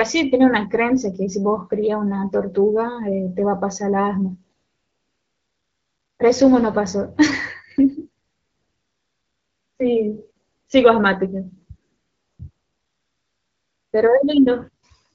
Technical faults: AMR comfort noise

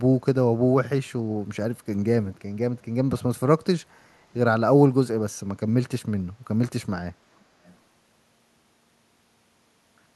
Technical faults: echo leak

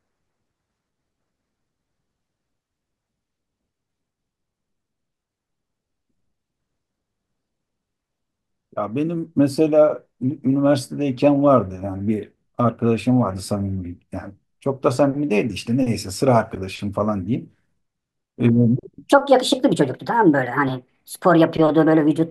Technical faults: wrong sample rate

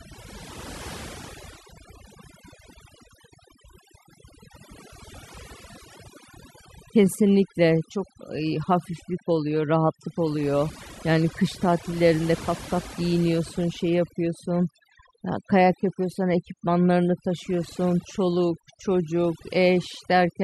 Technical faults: overdone noise removal

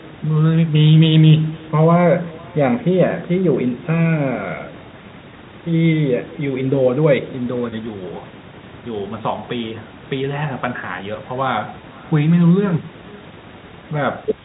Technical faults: echo with no canceller; packet loss with pitch repetition

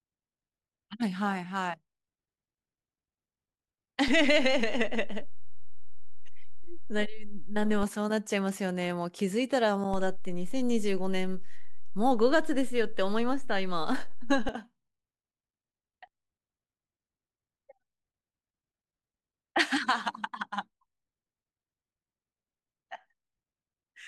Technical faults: DC step

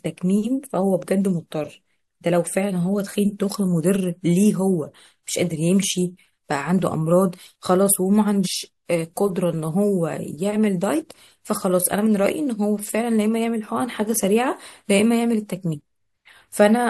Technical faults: compressed frames skipped

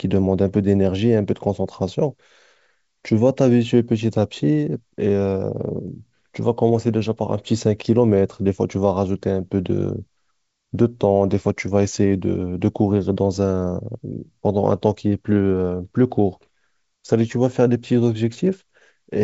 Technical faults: none

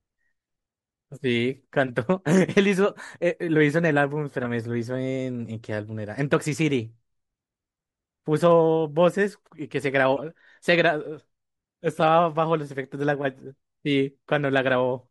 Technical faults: corrupt frame decoded

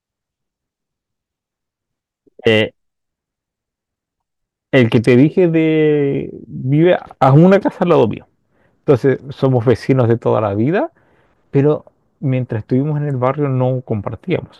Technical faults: hard clipping

